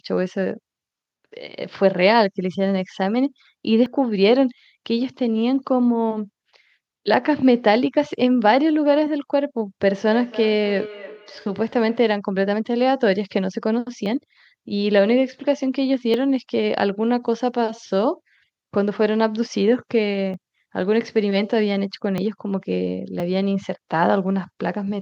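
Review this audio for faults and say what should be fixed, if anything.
Small jumps forward in the speech occur at 3.86, 7.14, 14.06, 16.14, 20.34, 22.18 and 23.2 s. At 3.86 s about 40 ms is missing, and about 20 ms at the others. This is likely a dropped buffer (overrun), where samples were overwritten before being read. On a waveform each appears as an abrupt discontinuity with no gap, and on a spectrogram as a thin full-band vertical line. Prevent it by enlarging the capture buffer or raising the audio thread's priority.

From 10.08 to 12.16 s the speech returns at about 300 ms intervals, peaking at about −16 dB relative to the speech. This is feedback echo between two devices: a second device in the room replays this microphone's signal, which is picked up again. A spectrogram shows fainter, thinner copies of each syllable offset by about 300 ms. Prevent it by muting or leaving the call on one device, or using headphones.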